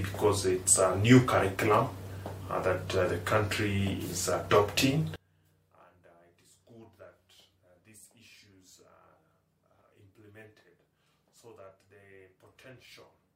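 From 5.16 s to the end, the sound collapses by about 29 dB into a faint residue, with the centre gone. The likely cause is one channel inverted, cancelling shared content when summed to mono. Unlike a dropout, a faint copy remains.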